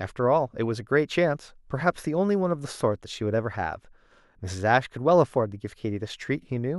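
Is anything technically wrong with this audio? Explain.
No, nothing technically wrong stood out on listening to this speech recording.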